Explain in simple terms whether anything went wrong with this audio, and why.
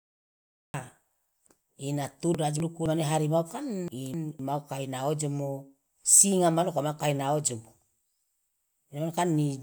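Yes, two things went wrong. First, a cut-off start: the recording began late, so there's silence until 0.74 s, then the speech jumps in mid-sound with no natural lead-in. Second, frames out of order: at 2.35 to 2.86 s and again at 3.88 to 4.39 s, two neighbouring quarter-second chunks played in swapped order, giving a brief garbled flutter.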